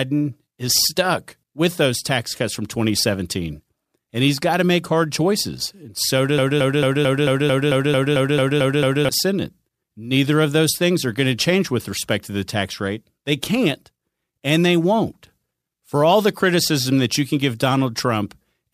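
At 6.38 s the speech locks into a broken-record loop. A fragment about 0.22 s long repeats exactly, back to back, roughly twelve times. The stutter runs until 9.09 s. It sounds like a rapid mechanical judder with no forward progress. The likely cause is a stall in the player, encoder or stream that kept resending the last piece it held. Whatever should have played during those 2.7 seconds is gone.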